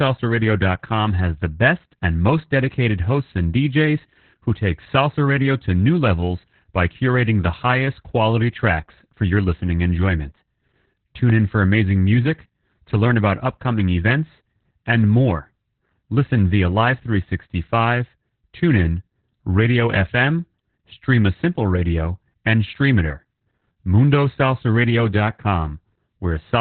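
From start to finish the speech carries heavy Opus voice compression: nothing reaches above 4.3 kHz, so it sounds narrowband, muffled and hoarse, with a faintly robotic buzz from coarsely coded excitation. That fits the SILK coder at roughly 8 kbps rather than simple low-pass filtering, which would dull the sound without the grainy texture.

At 11.30 to 11.32 s a single loud pop, peaking a few decibels above the speech, cuts in while the speech continues underneath. Its likely cause is an electrical step or glitch. It is one isolated pulse, not the repeated crackle of dropouts.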